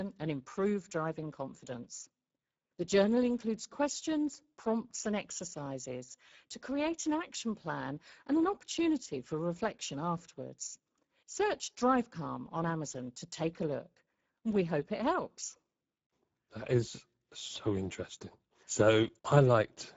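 From start to finish, the speech carries Speex codec damage, and it is plainly audible. Speex is a CELP codec built for low-rate voice links. Here it has too few bits to code the excitation well. The result is a noisy, hoarse texture on the voice, which fits a rate of roughly 10 kbps. Nothing is left above 7.7 kHz. The top of the band sounds thin, with no real air or crisp detail.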